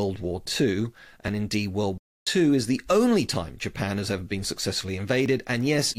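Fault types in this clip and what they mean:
Playback stall: The speech cuts out mid-flow from about 1.98 to 2.27 s, roughly 0.29 s of silence, then carries on. The likely cause is the player running dry of data or its output thread being held up briefly.
Overlap between stream segments: Just after "has ever been successfully", at about 5.26 s, a short piece of speech is cut away and the waveform jumps, giving a small click or skip. Two segment time stamps overlapped, which fits 2-second segments, and the player discarded sound that was not actually duplicated.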